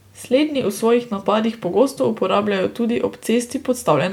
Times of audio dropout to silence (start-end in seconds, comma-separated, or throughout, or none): none